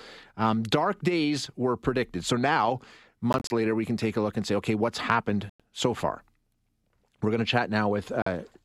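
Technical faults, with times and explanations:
3.33 to 3.50 s, Bluetooth dropout: the speech breaks up into several short gaps, the longest about 29 ms, adding up to roughly 87 ms of silence over 174 ms, likely from packets not reaching the headphones in time.
5.50 to 5.60 s, Bluetooth dropout: one solid hole of about 100 ms, and the speech comes back further along, as if it had kept playing.
8.22 to 8.27 s, Bluetooth dropout: a shorter cut of about 44 ms.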